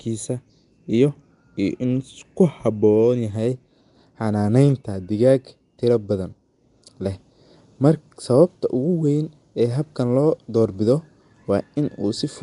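From start to finish the speech carries a rough, hissy halo and a smeared, underwater quality, with nothing above 10.6 kHz, likely from Nellymoser compression: coarse per-block bit allocation leaves weak bands noise-filled, and the damage fits a bitrate around 44 kbps.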